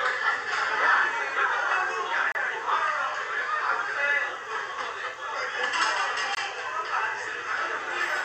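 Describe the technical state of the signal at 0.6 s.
At 0.6 s the sound is intact, with no dropout, distortion, glitch or other technical fault.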